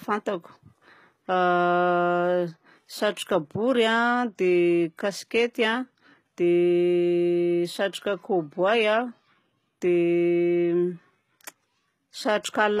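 The speech was likely squeezed through HE-AAC compression at a very low rate, one that fits about 20 kbps. The treble is synthesised from lower bands rather than kept, so s sounds come out gritty and lispy throughout, with nothing above 14.9 kHz.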